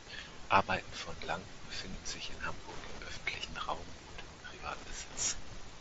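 Speech, carried over a wideband Bluetooth headset link with faint mSBC graininess, picks up Wi-Fi interference from 1.69 s to the end: a steady tick about ten times a second, roughly 20 dB under the speech. The 102.4 ms beacon rhythm separates it from the much faster 217 Hz GSM buzz.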